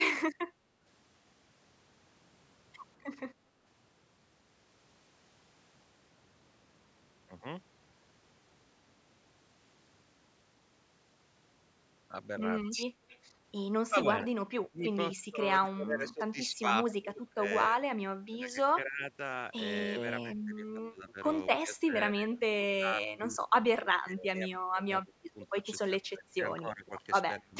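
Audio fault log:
12.67–19.12 s and 20.24–27.57 s, speech suppressed in double talk: the speech sinks in uneven bites, about three seconds' worth in the first span and about four in the second, dropping by around 20 dB and then around 25 dB. This is likely an echo canceller mistaking near-end speech for loudspeaker echo while the far side talks. Unlike packet-loss dropouts, the cuts are deep attenuations rather than clean millisecond gaps.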